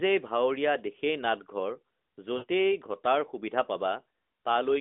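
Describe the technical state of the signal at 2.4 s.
Lost AMR speech frames occur at 2.38 to 2.45 s. For about 40 ms, the decoder replays its last good pitch and vocal tract settings at fading gain. The result is that the speech is drawn out and fades, and the voice comes back weak or rough for a moment.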